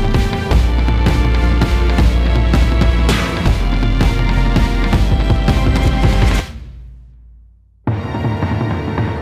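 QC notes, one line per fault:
No faults were heard anywhere in the clip. The sound holds together across its whole length.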